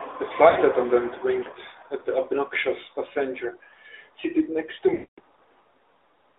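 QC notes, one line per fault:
throughout: AMR narrowband mobile codec. The speech is confined to a phone line band of roughly 300 Hz to 3.7 kHz, with nothing above 4 kHz, so sibilants and breath are dull and the low end is thin. Codec damage is plainly audible: at 10.2 kbps the vocal tract model and sparse pulse excitation leave a buzzy, synthetic edge on voiced sounds, and anything that is not speech smears into a warble.
0.50–0.59 s: lost AMR speech frames. A short gap of about 60 ms, which fits three 20 ms frames, is covered by the decoder repeating its last good pitch and spectral settings at reduced gain. It comes across as the sound being briefly drawn out and fading before normal decoding resumes.
4.94–5.20 s: lost AMR speech frames. A longer run of about 240 ms, which fits twelve frames. The concealed sound is held and stretched, then fades toward silence within roughly the first 0.1 to 0.2 s as the gain keeps falling. 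When good frames return, the speech comes back weak or rough for a moment while the decoder state recovers.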